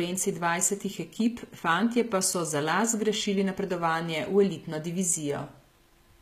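Speech with plainly audible HE-AAC compression damage throughout, likely from a very low bitrate around 20 kbps. Unlike a simple low-pass, the treble stays bright up to 14.9 kHz but sounds synthetic, so s sounds turn gritty and metallic.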